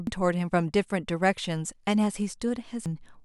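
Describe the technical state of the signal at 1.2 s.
At 1.2 s the speech signal is intact, with no audible technical fault at that moment.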